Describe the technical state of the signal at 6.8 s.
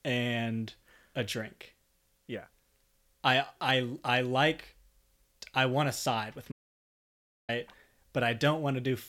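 At 6.8 s you're right in the middle of an audio dropout to silence, running from 6.52 to 7.49 s just after "want to side with". The input was likely lost briefly while the recorder kept writing silence, so speech cuts off into dead, roomless silence for nearly a second.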